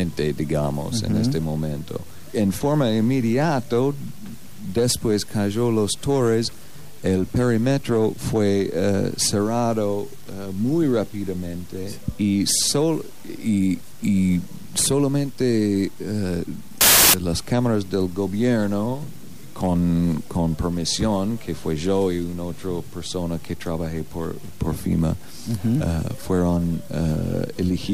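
From 16.81 to 17.14 s a wrong sample width fault bursts out as loud broadband noise with the real sound faintly buried, sped up 1.5 times and raised in pitch. Sixteen-bit data read as packed 24-bit misaligns the bytes. The waveform turns to dense noise, and the spectrogram shows a dense wash.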